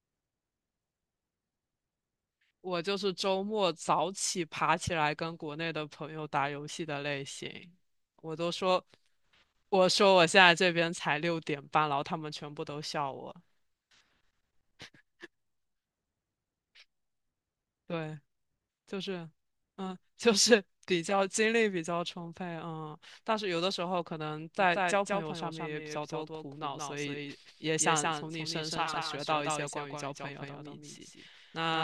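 From 24.6 s to the end, there's a doubled audio track: a second full-band copy of the speech trails about a fifth of a second behind, a bit quieter, kicking in abruptly with no room colour. Likely a second capture path or a misaligned edit.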